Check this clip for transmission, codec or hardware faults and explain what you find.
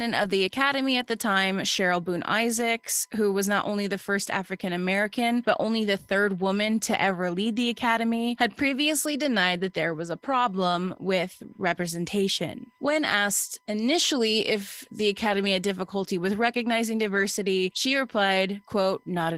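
Two faults run through the whole clip: a USB whine and Opus voice compression.

The USB whine sits under the speech from start to finish. It is a steady tone fixed at 1 kHz, roughly 45 dB below the signal. A USB bus draws current in regular 1 ms frames. That pulsing leaks into the audio path through shared power or ground, so it sounds at exactly 1 kHz. It comes across as a faint, thin, unchanging pitch.

The Opus voice compression is also present throughout, and its damage is plainly audible. The band stays wide, reaching toward 20 kHz, which suggests hybrid mode. Here a linear-prediction coder handles the lower band and a transform layer covers the top. The coarse excitation coding points to a low bitrate, around 16 kbps, with 20 ms frames. The speech sounds slightly hoarse and robotic.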